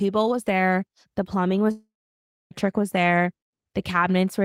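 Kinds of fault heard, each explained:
Long network dropout: from 1.71 s to 2.54 s the speech breaks off, the last sound carries on as a fading buzz, then 0.62 s of silence follows before speech resumes with 0.8 s lost, likely a stall in packet delivery.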